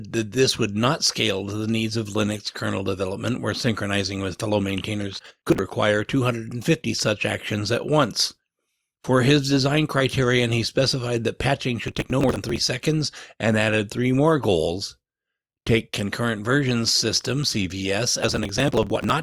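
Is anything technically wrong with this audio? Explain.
Yes. Processor overload crackle occurs three times: 5.19 to 5.59 s after "synchronizing with fellow maintainers", 11.88 to 12.57 s between "he specified that patching" and "seconds and added three", and 18.23 to 19.10 s. The processor misses dozens of deadlines for buffers of roughly 10 ms, and each missed buffer is skipped. The hard-edged gaps pile up into gritty crackle over the speech.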